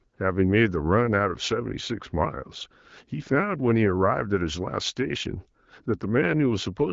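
No technical faults occur in this speech clip. It passes through an AMR wideband (HD Voice) codec at 12.65 kbit/s, which leaves the audio band-limited to about 7 kHz with only light coding damage.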